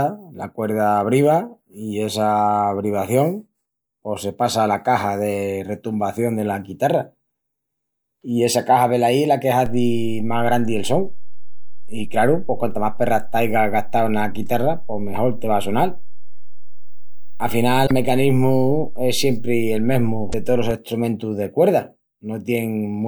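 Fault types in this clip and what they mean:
DC step: The waveform's zero line shifts abruptly at 9.66 s, right after "es la que", as if an offset were suddenly switched into the signal path. The speech rides on that shifted baseline unchanged. The offset holds until 20.71 s, where it returns, just before "estrumentus de". Each shift is heard as a low thump or click. The speech itself carries on through both moments without any change in level or tone.
Damaged data in a compressed stream: Corrupted bytes in the coded audio make the decoder misread frames and lose its place. It then hunts for the next valid frame header. This clip has two such events. The first runs from 17.83 to 17.91 s, the second from 20.29 to 20.34 s. Each is a brief chirp, squawk, click or short hole lasting well under a tenth of a second.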